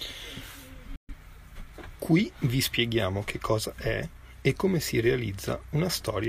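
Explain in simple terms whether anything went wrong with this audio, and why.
Something went wrong. The speech cuts out briefly at 0.96 s and comes back at 1.13 s. This is a digital broadcast dropout. The receiver stopped getting good data, so it went silent with a quick fade. What was sent in that gap is lost for good.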